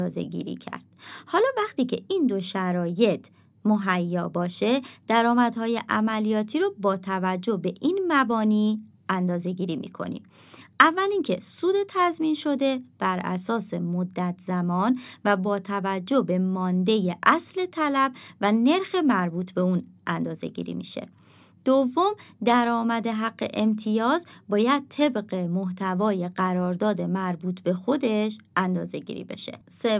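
No technical faults can be heard anywhere in the recording.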